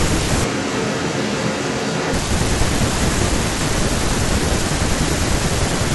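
A speech recording in which the close microphone likely dropped out from 0.44 to 2.14 s, so the audio switches to a distant microphone for that stretch. The voice turns abruptly roomy and hollow, loses bass, falls roughly 5 dB in level and carries more audible room noise, then snaps back to the close sound.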